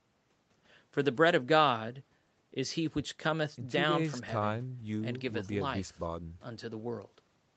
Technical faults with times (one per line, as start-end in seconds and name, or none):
none